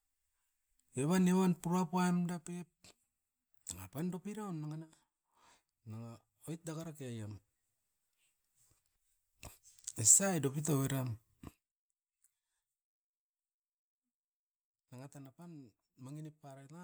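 No technical faults are audible in this recording.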